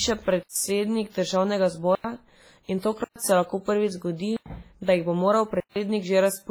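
Heavy smeared, washy ringing with hiss that breathes with the speech runs throughout, likely from WMA compression at a low bitrate near 24 kbps. Unlike the gaps, it never stops the sound. Blocks of digital silence cut the audio out and back with no fade at 0.43–0.56 s (127 ms), 1.95–2.04 s (93 ms), 3.04–3.16 s (116 ms), 4.37–4.46 s (93 ms) and 5.60–5.76 s (157 ms). These are short holes, likely from an unfilled output buffer, and the 93 ms gaps fit a 4096-sample buffer.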